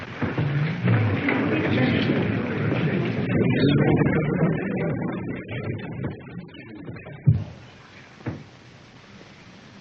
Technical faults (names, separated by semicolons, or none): adaptive stream at a lower bitrate